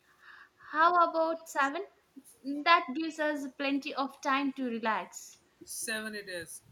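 Speech, with two faults. From 0.56 to 0.66 s the talker's level dips by around 10 dB for roughly 70 ms in total: speech suppressed in double talk, likely an echo canceller that could not separate the talker from far-end echo while both sides spoke and attenuated everything. At 1.36 to 1.44 s and 1.62 to 1.67 s a faint delayed copy of the speech appears, lagging by 140 ms and sitting around 30 to 35 dB below the direct signal. This is echo leak, likely residual loudspeaker pickup that the far end's canceller failed to remove and sent back.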